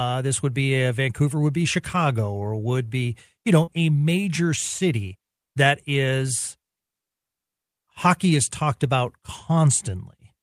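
At 3.63 to 3.69 s, between "or would be you" and "a major city that", there is short concealed packet loss. About 40 ms of speech arrived too late for the decoder, which extrapolated roughly 37 ms from the preceding sound and crossfaded back. The result is a brief smear in the speech.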